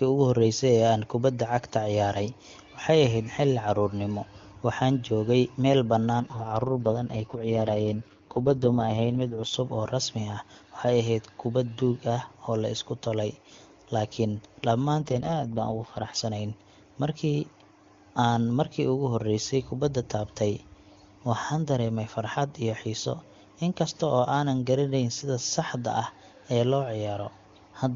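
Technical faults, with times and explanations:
6.20 to 9.54 s and 15.02 to 16.16 s, AMR rate drop: the speech turns rough, buzzy and synthetic, then clears up again, with no gap and no narrowing of the band. That's the wideband AMR codec being pushed down to a low rate, likely because of a weak radio link, so more bits go to error protection. The roughness fits a step from the clean 23.85 kbit/s HD Voice rate down to around 6.6 kbit/s.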